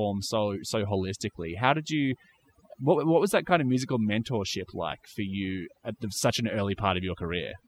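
Right from the start and all the way through, you can hear overdone noise removal. The denoiser was pushed too hard, cutting bands near its noise estimate down to nothing. So the background collapses into near silence with twinkly specks, and quiet parts of the speech get cut away along with it.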